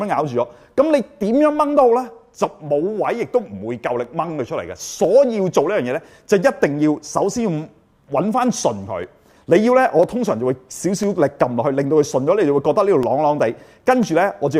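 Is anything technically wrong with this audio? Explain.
Yes. Periodic USB or driver dropouts run from 0.05 s to 14.03 s, once every 1.0 s. A recurring background task stalls the audio path, and each time about half a millisecond is replaced by silence. This produces evenly spaced ticks that sound wherever signal is present.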